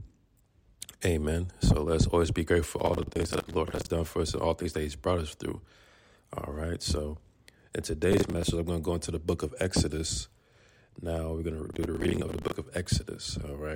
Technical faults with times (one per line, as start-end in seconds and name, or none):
2.79-3.90 processor overload crackle
8.12-8.43 processor overload crackle
11.70-12.52 processor overload crackle